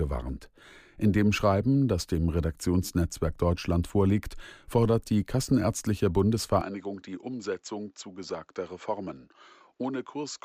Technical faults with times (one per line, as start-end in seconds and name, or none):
6.61-10.44 input switched to a poorer device